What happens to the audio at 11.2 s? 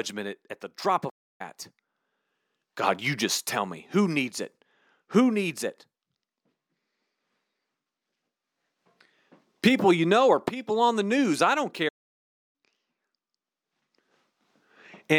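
Nothing goes wrong at 11.2 s; the speech carries on intact through that moment with no dropout, click or distortion.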